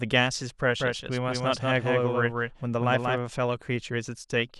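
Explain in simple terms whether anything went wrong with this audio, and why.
From 0.8 to 3.18 s the speech is heard twice: a second, somewhat quieter copy follows about a fifth of a second behind, starting and stopping abruptly. This is a doubled audio track, likely from the sound being captured again through a slower path.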